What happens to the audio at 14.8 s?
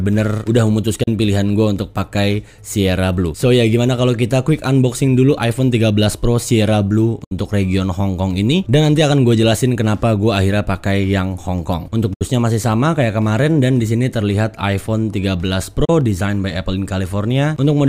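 Nothing goes wrong at 14.8 s. The audio plays through that moment intact, with no audible fault.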